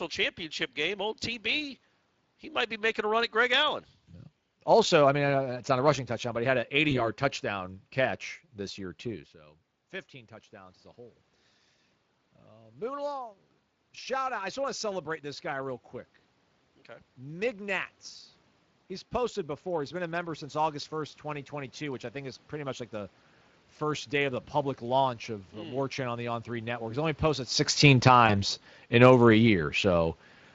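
Throughout, the Speex codec runs at a middling setting, around 20 kbps by the sound of it, with too few bits for the excitation, so the speech comes out plainly hoarse and noisy.

From 6.89 to 7.04 s, VoIP packet loss concealed by the speech codec: a lost stretch of about 20 ms is filled by extrapolating the last pitch and filter, giving a brief smear that stays distorted after speech returns.

From 27.81 to 30.13 s, just after "only posted", automatic gain falling: the gain control lowers its gain by about 4 dB, so voice and room noise sink together. This follows the talker moving near 27.5 s.

Inside that fade, from 28.27 to 28.37 s, a second concealed loss of about 20 ms produces another short, fading patch before the speech recovers.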